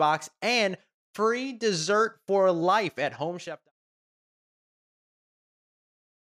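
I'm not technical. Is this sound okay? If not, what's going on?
Yes, it's fine; it fades away by 3.72 seconds.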